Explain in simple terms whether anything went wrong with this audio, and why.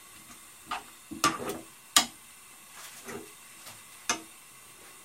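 Nothing went wrong here.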